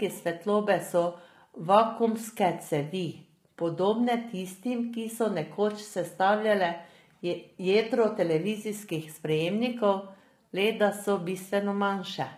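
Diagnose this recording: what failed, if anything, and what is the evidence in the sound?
The codec stage is at fault. Throughout the speech, voices sound rough and grainy, with noise filling between harmonics and a synthetic top band, likely from low-delay AAC compression. Its short frames blur pitch harmonics, which fits AAC-ELD near 24 kbps. Unlike a narrowband codec, the top band stays present.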